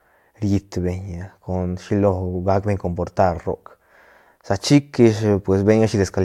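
No technical faults can be heard anywhere in the speech. There is nothing in the audio that needs a time mark or a closer look.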